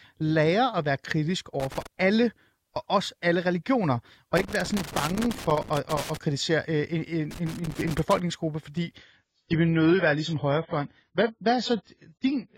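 Loose connector crackle appears from 1.60 to 1.87 s, again from 4.37 to 6.17 s, and from 7.31 to 8.20 s. A worn or dirty contact somewhere in the chain is making and breaking as it shifts, so the signal is chopped on and off many times a second. Each stretch is an irregular burst of scratchy crackle over the speech, the middle one lasting nearly two seconds.

From 8.97 s to the end, the clip sounds like an adaptive stream at a lower bitrate. The quality drops abruptly with no gap, as if playback switched to a cheaper version of the stream when the connection slowed. Nothing remains above 7.6 kHz, so the speech loses its air and sibilance, and swirly, synthetic coding artefacts rise. The sound points to AAC falling from around 96 kbit/s to around 16 kbit/s.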